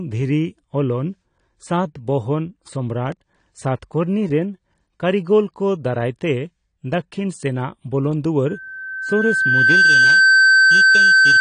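Low-bitrate AAC-LC coding, likely the cause of the constant damage here, discards detail across the whole speech clip. Nothing survives above 9.9 kHz, so the speech sounds dull and muffled. The codec damage is plainly audible: sibilants and sustained sounds take on a smeared, warbling texture, which fits a rate somewhere around 32 kbps for this kind of AAC compression.

From 3.12 to 3.38 s, the processor fails to finish its small audio buffers on time, each one only a millisecond or two long. A handful of deadlines are missed in quick succession. Each miss is filled by replaying a scrap of old audio with hard edges. This processor overload crackle is heard as a brief burst of gritty tearing laid over the speech. It stops once the load clears.

At 8.48 s, a loudspeaker feedback squeal begins. The microphone is picking up the loudspeaker it feeds, and at 1.6 kHz the loop gain rises above one. 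That single tone reinforces itself on every pass, swelling over about a second and a half into a piercing squeal roughly 10 dB louder than the speech. It is never broken off and runs to the end of the clip.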